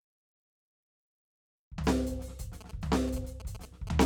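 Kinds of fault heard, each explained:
GSM signalling bursts: From 2.61 to 3.89 s the music picks up a galloping run of short buzzes, repeating at about 217 Hz, sitting roughly 15 dB below the music. This is interference from a nearby 2G handset sending short clusters of radio bursts while signalling to its network rather than carrying a call. Some stage in the audio chain rectifies that RF, turning each burst envelope into an audible buzz pattern.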